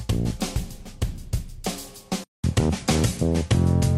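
Two stream segments overlap in their time stamps, and the player trims the doubled stretch from audio that was never actually repeated. About 32 ms goes missing between 0.56 and 0.59 s, so the waveform jumps and a small click or skip is heard. This is an overlap between stream segments. It is consistent with segments about 2 s long, though only this one join is affected. From 2.24 s to the end, the input was likely switched to a poorer device. After a silence of about 200 ms, the sound becomes duller and narrower, with nothing above 11.9 kHz. The level shifts by about 5 dB, and a new noise floor comes in at roughly 40 dB below the signal.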